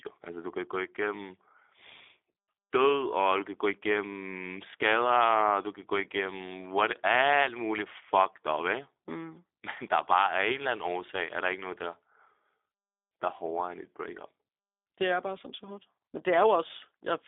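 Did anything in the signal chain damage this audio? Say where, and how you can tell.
Yes. A G.729 codec stage damaged the whole clip: the speech sits within 300 Hz to 3.6 kHz and sounds rough and synthetic, which fits an 8 kbit/s model rebuilding it from sparse pulses.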